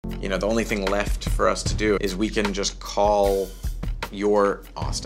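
No technical faults can be heard anywhere here.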